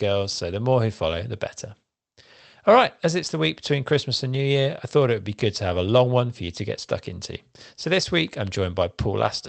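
Nothing in this speech goes wrong at any point, and the call path it went through leaves just its ordinary coding character, with a top end that stops around 8 kHz, which fits a wideband Opus setting.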